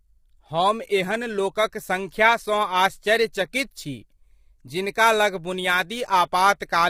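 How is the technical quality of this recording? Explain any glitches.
Quality's pretty rough. It's speech, and across the whole clip it sounds grainy, with noise filling between harmonics and a thin, synthetic top end. That's likely low-delay AAC compression, AAC-ELD's short frames starved at something like 24 kbps.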